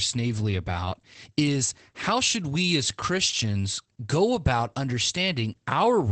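From start to finish the speech carries Opus voice compression, running in its SILK linear-prediction mode. Nothing gets through above about 8.7 kHz, which is the wideband limit, so the top end sounds dulled. The codec damage is plainly audible: with the excitation coded this coarsely, the voice comes across a bit muffled and hoarse with a faint robotic edge, which points to a low bitrate somewhere around 12 kbps.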